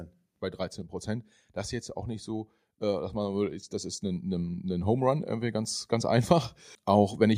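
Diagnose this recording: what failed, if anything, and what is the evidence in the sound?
Automatic gain rising, in the call processing stage. From 1.93 s, right after "ist jetzt", the level of the speech and the background noise climbs together, slowly and steadily, until about 7.33 s, for a total lift of about 9 dB. The AGC judged the input too quiet and kept raising its gain over those 5.4 seconds. On a waveform the envelope widens like a ramp. On a spectrogram every band, including the noise floor between phrases, brightens evenly.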